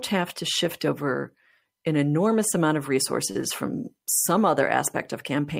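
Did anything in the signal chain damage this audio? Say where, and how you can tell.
Yes: a short stall from a late packet at the network and jitter-buffer stage, from 3.31 to 3.39 s, right after "an enormous amount of". One packet arrived late, the buffer ran dry, and the receiver held the last sound for about 41 ms before resuming where it left off. Nothing is lost, but playback now runs 41 ms later. On a spectrogram the harmonics freeze into flat bands; the waveform shows one cycle repeated with a slight buzz or dip.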